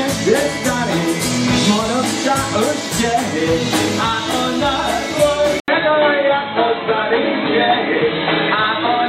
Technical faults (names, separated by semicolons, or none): input switched to a poorer device